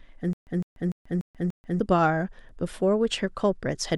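From 0.33 to 1.80 s, a stutter with silent gaps: a 156 ms fragment of speech repeats five times, each followed by 137 ms of digital silence, every 293 ms. The likely cause is a stalled stream replaying its last fragment at each retry. Unlike plain dropouts, the same audio returns identically, and the material that belonged there is lost.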